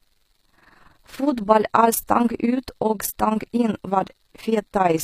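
Speech is affected by overlap-add ripple from start to finish. The level dips and recovers by about 11 dB roughly twenty times a second, a rigid, robotic flutter locked to the frame rate rather than a smoother musical tremolo. The treble is plainly damaged, with gritty, metallic s sounds and nothing above 15.5 kHz. That bright-but-false top, not simply a dull low-passed one, points to likely HE-AAC compression at a low bitrate around 24 kbps.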